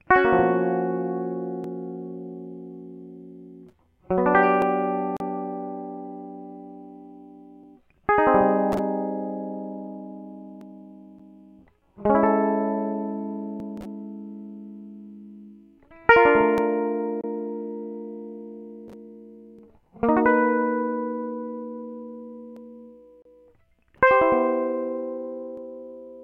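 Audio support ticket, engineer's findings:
Short butt-joined skips about every 3 s, 1.64 to 25.57 s, each dropping around 20 ms. Likely audio missing between chunks, lost at each 3 s chunk handover.

Hard-edged silent holes at 5.17, 11.19, 17.21 and 23.22 s, about 35, 9, 27 and 31 ms. Gap between stream segments: 6 s timestamps don't meet, so it's padded with silence, no audio lost.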